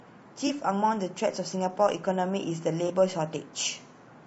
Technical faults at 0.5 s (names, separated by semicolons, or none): low-delay AAC compression; AAC frame loss with concealment